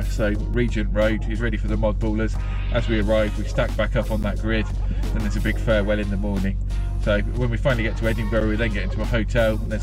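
Blocks of digital silence fall at 0.54, 2.34, 4.23 and 8.40 s, lasting 2.9, 2.9, 11.6 and 8.7 ms. The two shortest fit a 128-sample buffer and the 4.23 s gap a 512-sample one, pointing to unfilled output buffers. Hard cuts to silence, with no fade, make tick-like clicks rather than a smeared dropout.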